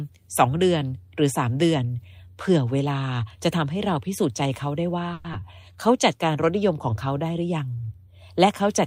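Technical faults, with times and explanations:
5.13–5.26 s, call audio freeze: Packets were likely delayed in transit, leaving the jitter buffer empty. The receiver stretched the last sound into a fading buzz for about 110 ms, then resumed where it left off, inserting a gap without losing audio.
5.32–5.35 s, short concealed packet loss: About 40 ms of audio never reached the decoder in time. The receiver patched only 10 ms by continuing the preceding sound, then jumped ahead about 30 ms, so the audio briefly smears and skips.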